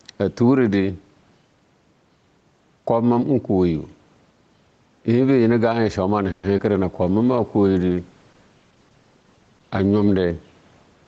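Speech runs through a call path with four audible faults. The first is gain pumping across the whole clip. Loud and quiet passages sit closer together than they should and the delivery sounds squashed. The swing is a few decibels, roughly 5 dB, and most likely comes from the input gain being set far too high with a fast limiter clamping each peak. On a waveform the noise floor between phrases bulges upward and then collapses at each onset. On a spectrogram the faint background band brightens in the gaps and dims under the speech.

From 6.31 to 6.45 s a call audio freeze stretches the sound. For 120 ms the last sound is drawn out as a fading buzz rather than silence, and the speech then resumes where it stopped, so nothing is lost but everything after it arrives 120 ms later. The likely cause is delayed packets draining the jitter buffer. A spectrogram shows the last spectral shape smeared horizontally and thinning out. 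The waveform shows a decaying, repetitive stretch with no flat gap.

Just after, at 6.57 to 6.60 s, short concealed packet loss leaves a brief smear. About 30 ms of audio never arrived, and the receiver covered only about 10 ms of it by extending the preceding sound before blending back, leaving about 20 ms missing. This appears as a tiny blurred notch on the spectrogram and a slight discontinuity in the waveform.

From 7.03 to 10.27 s a call bitrate drop halves the Opus rate from 32 to 16 kbps, and it stays at the low rate for about 3.15 s. The encoder codes far more coarsely, so the speech turns rough and watery until the rate recovers. On the spectrogram the harmonics look patchy and grainy, breaking into blocky fragments rather than clean lines, up to the normal 8 kHz ceiling of the call path.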